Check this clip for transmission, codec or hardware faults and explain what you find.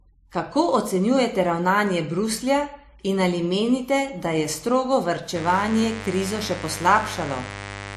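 Two faults are present: one runs through the whole recording and one enters near the end.

Throughout the speech, the top end stops dead at 14.5 kHz, and the sound has two layers of compression damage heard together. This is likely transcoding between lossy codecs. The character points to an MP3 pass around 51 kbit/s followed by WMA at about 96 kbit/s. The second encoder spent its bits re-encoding the first one's artefacts and added its own, and the lower bandwidth limit carried through the chain.

From 5.36 s, right after "menite da je strogo", to the end of the clip, a steady, raspy buzz sits under the speech, only about 10 dB below it. This is mains buzz at 50 Hz. Sharp switching spikes, of the kind a dimmer, rectifier or unshielded cable lets into the path, repeat twice per mains cycle. That spreads harmonics of 50 Hz up into the kilohertz range, which gives the buzz its gritty edge rather than a smooth hum.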